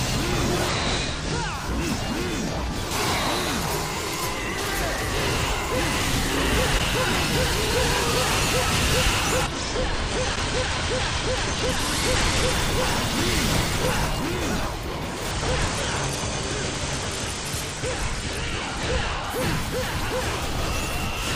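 Three Bluetooth SBC bit pool drops dull the treble and add a gritty noise: 0.68 to 1.54 s, 9.42 to 12.52 s and 15.31 to 19.30 s. In each, the link apparently starved the encoder. The audio points to a bit pool falling from about 28 to about 11, near 90 kbps, which leaves the top sub-bands with few or no bits and the rest coarsely quantised. A spectrogram shows the upper band thinned or cut away, with grainy noise filling what remains.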